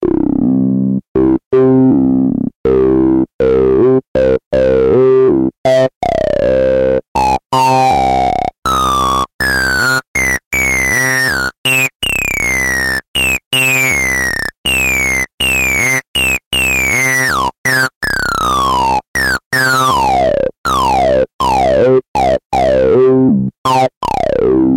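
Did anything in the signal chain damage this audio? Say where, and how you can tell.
No, nothing in this recording stood out on listening as damage from any stage of the chain.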